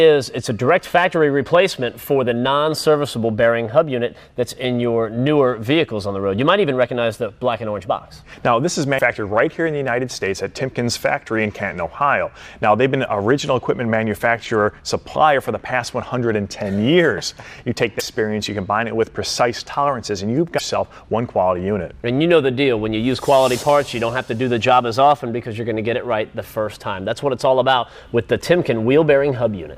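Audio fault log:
8.98–9.01 s, 17.99–18.02 s and 20.57–20.60 s, broken MP3 bit reservoir: each is a short garbled blip, about 30 to 40 ms long, where the sound lurches forward a touch. Likely some MP3 frames got dropped. The frame right after each gap then reaches back into the bit reservoir for data that now belongs to a different frame, so it decodes as junk until the stream settles. Each blip is about the length of one 26 ms frame, or a little over.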